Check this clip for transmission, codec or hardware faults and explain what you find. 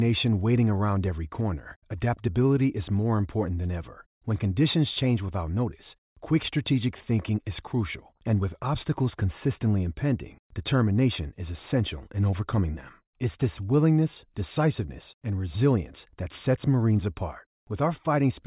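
Nothing faulty can be heard anywhere in this speech.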